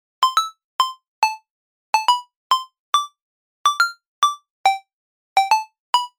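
No technical faults are audible.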